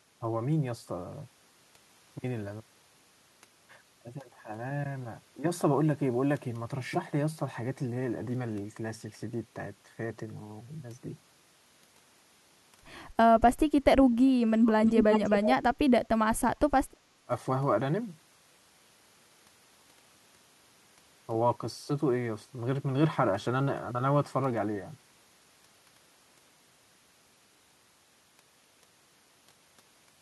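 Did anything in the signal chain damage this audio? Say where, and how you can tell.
Yes, and it all sits in the call processing. From 13.7 to 14.89 s the speech sinks by about 30 dB at its deepest, roughly a second of it pulled down, with another short dip of about 20 dB at 17.25–17.31 s. That pattern looks like speech suppressed in double talk: with both ends talking at once, the echo canceller likely couldn't tell this talker from its own loudspeaker echo and clamped down on everything.

Right on the heels of that first dip, from 14.85 to 15.55 s, there's a second copy of the speech trailing the original by 339 ms, and it's loud, only about 5 dB under the direct sound. That's echo leak. One side is on a loudspeaker, and its echo canceller likely failed to scrub what its microphone picked up, so the residue got sent back down the line.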